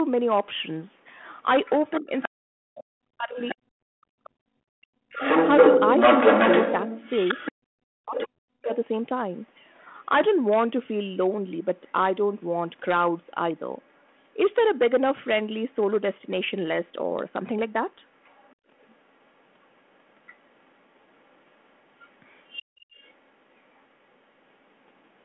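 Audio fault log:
1.66–8.76 s and 18.24–23.15 s, other side's voice leaking through: a second voice is heard alongside the near talker in both stretches. In the first it sits somewhat louder than the near speech, and in the second it is faint, around 25 dB below. The likely cause is that the far end, played on the talker's loudspeaker, reached the microphone and was only partly removed by the echo canceller.
2.01–8.71 s, speech suppressed in double talk: while the leaked voice is present, the near talker repeatedly sinks, with the deepest dips around 40 dB and about three seconds lost in total across the span. The likely cause is both sides talking at once, with the canceller unable to separate the near voice from the echo and so attenuating everything together. The result is a talker who repeatedly dips in level.
18.56–18.67 s and 22.63–22.93 s, background gated by the echo canceller: the room sound briefly collapses, by about 22 dB for roughly 0.1 s and then by about 29 dB for 0.3 s, and returns. 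Both dips fall inside the second leakage span, where the canceller clamps the microphone while the loudspeaker is active and releases it afterwards. This is heard as short holes in the ambience within the narrow 200–3400 Hz line band.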